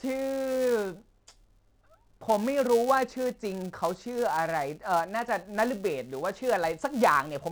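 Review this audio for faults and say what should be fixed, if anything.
A buzz at 345 Hz runs through the whole speech clip, rising and falling with its level: a filter restarted on every block. Each block starts from zeroed state, leaving a small transient at a rate that fits 128-sample blocks. Fix: carry filter state across block boundaries.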